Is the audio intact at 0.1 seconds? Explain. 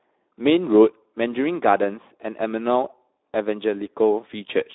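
No, at 0.1 s you're already hearing the Speex codec, which runs the whole clip at about 11 kbps through a 300 Hz to 3.7 kHz line band. Its CELP model gets too few bits for the excitation, so the speech comes out plainly hoarse and noisy.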